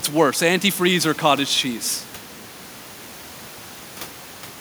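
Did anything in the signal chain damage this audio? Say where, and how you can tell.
No, nothing in the signal chain has damaged this speech recording. A steady background of room noise sits about 22 dB below the speech, and that comes from the room around the microphone rather than from any stage of the system.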